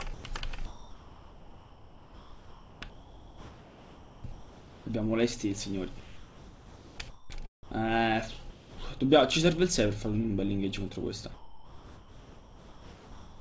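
At 0.14 to 0.24 s the sound gives way to steady synthetic noise for 100 ms, a sound dropped by the voice detector, likely because the sender's detector judged it to be background and sent comfort noise instead. From 0.66 to 4.86 s and again from 6.00 to 7.30 s the audio keeps switching between real sound and comfort noise, leaving repeated holes. This is sound chopped by the voice detector, likely a detector toggling transmission on and off. Further drops follow at 7.63 to 7.71 s, at 8.50 to 8.78 s, and from 11.34 s to the end. Throughout, nothing is heard above 8 kHz, which fits a G.722 call path.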